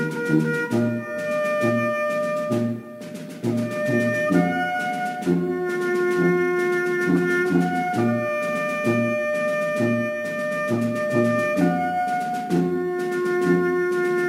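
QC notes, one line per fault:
Throughout, crude rate conversion: a gritty, inharmonic fizz rides on the sound and grows with loud and high-frequency passages, sitting very roughly 30 dB below the signal. The rate was raised with no filtering, simply by repeating the nearest sample, which fits a 44.1 kHz to 48 kHz change. The uneven repeats recur in a fixed cycle set by the two rates, creating spurious tones unrelated to the sound's own pitches.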